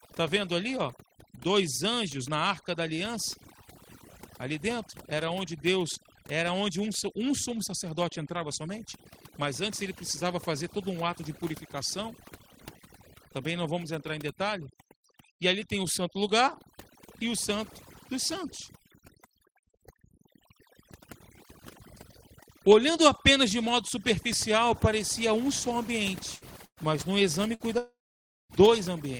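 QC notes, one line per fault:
Throughout: overdone noise removal. Background sits near silent with twinkling specks. Quiet parts of the speech are stripped away.
26.35–26.44 s, 26.65–26.80 s, 27.55–27.63 s: burst of packet loss. Last sound is stretched, then fades; about 60, 120 and 60 ms go missing. The second gap ends in silence.
27.78–28.53 s: long network dropout. The last sound fades into about 0.55 s of silence, and roughly 0.72 s of speech is gone, likely a lost network stream.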